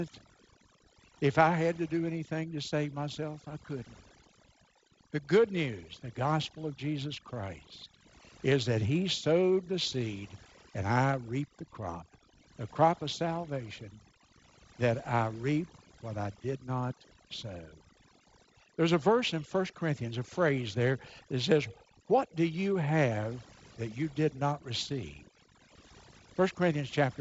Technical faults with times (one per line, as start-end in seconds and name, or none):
0.00-27.21 overdone noise removal